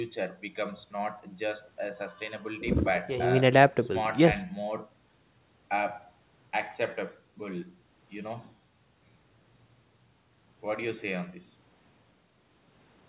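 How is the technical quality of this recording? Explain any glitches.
No glitches to report here, really: the speech has the narrow, phone-like sound of an ordinary call, with nothing above about 4 kHz, which fits a G.711-style call codec, and nothing goes amiss along the way.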